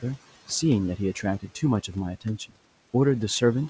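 A speech clip, with faint room noise sitting about 20 dB below the voice and no content above 8 kHz, consistent with a wideband G.722 call path. Between 2.21 and 2.53 s, speech is cut by the noise suppressor. It mistakes parts of the speech for background and pulls them down by up to about 17 dB, so roughly a tenth of a second of sound comes out swallowed and faint.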